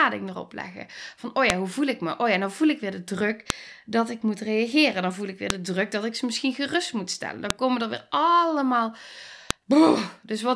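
Speech with a file header played as audio: sharp snaps at 1.50 s (before "hoe voel ik me"), 3.50, 5.50 (between "voel ik weer" and "de druk dat ik"), 7.50 and 9.51 s (after "komen er weer allemaal"). Unlike dropout clicks, they recur exactly every 2.0 s, marking joined pieces, regardless of the speech.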